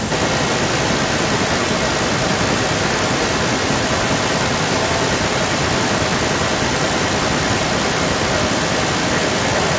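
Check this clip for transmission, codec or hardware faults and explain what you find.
One fault is present: an echo leak running from 0.1 s to the end of the clip. The speech returns as a delayed copy about 0.4 s behind the original, and that copy is roughly as loud as the direct voice. The likely cause is a far end playing the call on a loudspeaker whose echo canceller failed to subtract what its microphone picked up, sending that pickup back down the line. The call microphone processing limits the audio to nothing above 8 kHz.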